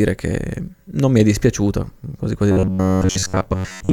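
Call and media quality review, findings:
Robotic sound from repeated short buffers, 2.52 s to end of clip after "è dispiaciuta quasi quasi". Rigid metallic buzz near 94 Hz, speech shape faintly kept. Likely jitter-buffer underrun: about 11 ms block looped, most real audio skipped.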